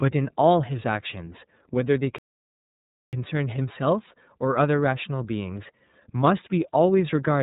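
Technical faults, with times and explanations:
Throughout, iLBC codec: the speech is band-limited with nothing above 4 kHz and has a rough, slightly synthetic edge. Each 30 ms frame's excitation is coded independently, and the artefacts are plainly audible, which fits iLBC's 13.33 kbps mode.
2.18 to 3.13 s, playback stall: the speech cuts out mid-flow and the output is silent for about 0.94 s before resuming. The likely cause is the player running out of data or its thread being blocked until it recovered.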